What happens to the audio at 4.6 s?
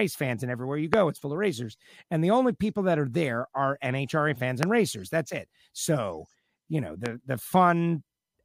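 A single sharp loud pop lands from 4.63 to 4.65 s, standing well above the speech, likely from a sudden voltage pulse from a plug, switch or static.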